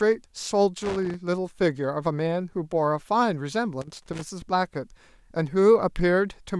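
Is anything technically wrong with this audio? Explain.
Yes. The speech has loose connector crackle in two bursts, from 0.82 to 1.14 s and again from 3.81 to 4.22 s. A worn or dirty contact in the signal path is making and breaking rapidly, so the audio is chopped on and off in an uneven pattern. Each burst is heard as irregular scratching and crackle lasting roughly a third to four tenths of a second.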